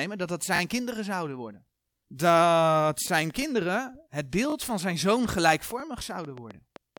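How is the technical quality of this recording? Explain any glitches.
The recording has two kinds of fault: brief stutters in four places and a ticking that runs through the second half.

The repeated buffer faults are tiny stutters where a sliver of sound plays more than once, each repeat joined with a hard edge. The first, at 0.56 to 0.60 s, falls between "dat dat" and "kinderen zouden worden" and repeats twice. Single repeats follow at 3.08 to 3.10 s and 5.80 to 5.82 s, and a double one at 4.50 to 4.54 s. The new audio arrived late, so playback replayed the previous block, whose length sounds like about 20 ms. Because each repeat is inserted rather than replacing anything, no speech goes missing.

The train of clicks starts at 3.30 s and continues to the end. It is a ticking of similar-shaped pops, about four per second at an uneven pace, peaking around 5 dB above the speech and audible in the gaps too. 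The likely cause is interference from nearby equipment or a faulty connection or power supply injecting repeated pulses into the signal.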